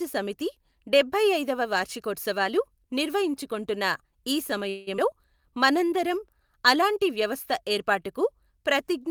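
From 4.69 to 4.89 s the speech stalls and a fading buzz fills 174 ms. This call audio freeze was likely caused by late packets, and unlike a skip, nothing is lost.

Between 4.97 and 5.00 s a skip ahead drops roughly a tenth of a second. The speech lurches forward with almost no gap, unlike the freeze's inserted pause.

From 5.40 to 6.46 s a jitter buffer slow-down repeats pitch periods, adding 97 ms. The speech runs at 91% speed with the same pitch, unlike tape-style slowing.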